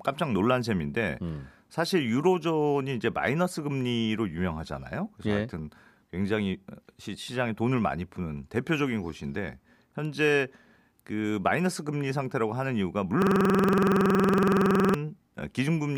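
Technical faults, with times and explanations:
13.22–14.94 s, system hang loop: the computer or driver stalled while the sound hardware kept replaying its ring buffer, so one 46.44 ms slice of the speech repeats exactly, some 37 times, which fits a 2048-sample buffer. Repeating at 21.5 Hz, the loop is too quick to hear as separate stutters and too slow for a smooth tone, so it comes across as a rough, rattling buzz that freezes the speech in place for about 1.7 seconds.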